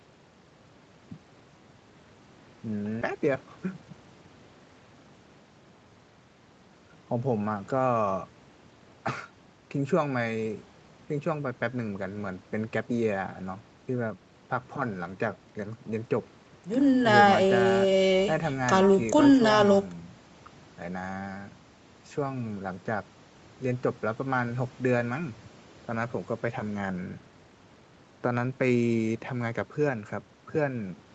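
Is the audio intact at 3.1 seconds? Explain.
No. At 3.01 s about 300 ms of audio was dropped, a skip ahead. Playback jumps straight forward with no gap, so a short piece of the sound is simply missing and the two sides are butted together.

From 3.11 to 4.07 s the jitter buffer still held more audio than its target, so a jitter buffer speed-up trimmed repeated pitch-period slices, around 100 ms in all. The sound runs about 9% fast at unchanged pitch and comes across hurried.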